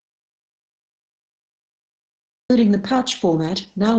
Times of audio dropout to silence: 0.00-2.50

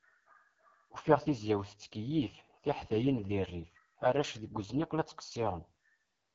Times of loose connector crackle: none

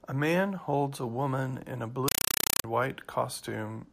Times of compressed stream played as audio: 2.08-2.64

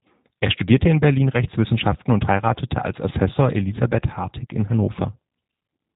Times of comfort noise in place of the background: none

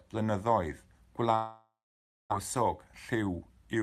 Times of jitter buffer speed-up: 2.58-3.83

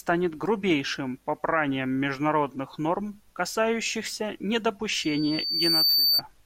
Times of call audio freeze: none

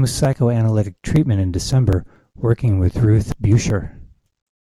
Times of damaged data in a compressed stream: 2.37

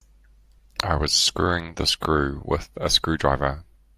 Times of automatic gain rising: none

